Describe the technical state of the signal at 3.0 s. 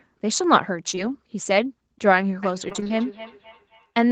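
At 3.0 s there is feedback echo between two devices, running from 2.42 s to the end. A second device replays the sound into the microphone, which sends it round again. Repeats arrive roughly every third of a second, thin and ringing, peaking about 18 dB below the speech.

Just before, from 2.69 s to 2.91 s, repeated packet loss leaves the sound choppy and robotic. Short holes, none over 20 ms, are patched by stretching the previous sound, covering nearly half that stretch.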